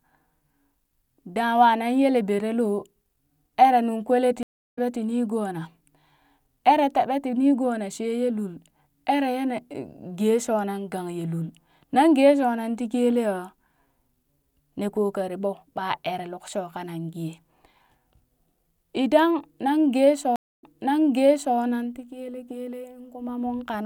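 At 4.43 s, after "eree nung kwele ti", a stream reconnect occurs. The connection drops for 329 ms of silence, then a fresh decoder resumes slightly later, skipping audio. At 20.36 s, another leaves 255 ms of silence and restarts 960 ms earlier, repeating speech, then "nan ti kele kele".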